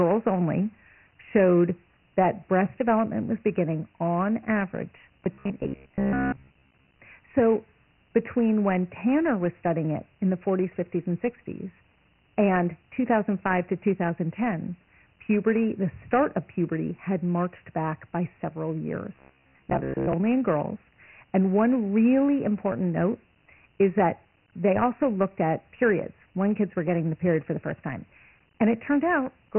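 Across the whole recording the speech sounds thin and gritty, with a hiss trailing every phrase and nothing above 3 kHz. This is Dialogic VOX ADPCM, heavily damaged: coarse 4-bit steps at roughly 24 kbps, which points to 6,000 samples a second and a correspondingly narrow band.

From 5.24 to 7.03 s, and again from 19.16 to 20.13 s, the speech turns into a stiff metallic buzz at 66.8 Hz that still roughly tracks the syllables. This is robotic sound from repeated short buffers, likely caused by audio arriving too slowly, so a slice of about 15 ms is replayed while most of the real signal is skipped.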